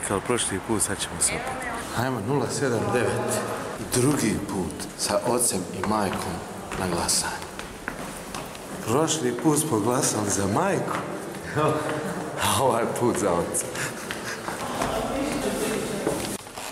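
Nothing technical stands out in this audio, so there's no fault here to point to or explain.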